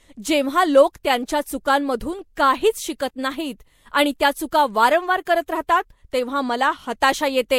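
Right through the speech there's nothing above 16.6 kHz, plus stacked smeary, swirly artefacts, likely transcoding between lossy codecs, something Vorbis-like feeding into a modest-rate MP3.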